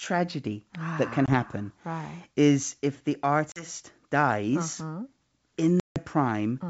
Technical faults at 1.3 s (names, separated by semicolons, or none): packet loss on an ADPCM call